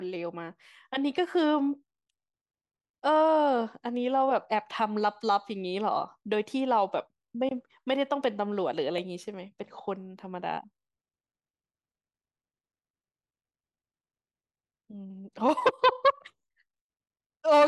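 Nothing in this speech recording stands out as a technical fault, so there's nothing to flag here.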